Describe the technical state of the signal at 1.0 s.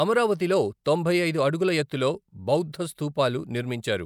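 At 1.0 s the speech signal is intact, with no audible fault at that moment.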